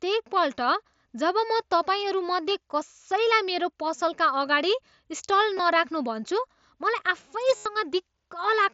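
At 5.58 s, just before "नराख्नू भन्छु", concealed Bluetooth headset packet loss fills about 15 ms, likely two dropped packets. From 7.56 to 7.66 s a 90 ms run is continued from repeated recent waveform, giving a held buzzy tone and a slight warble as real audio resumes.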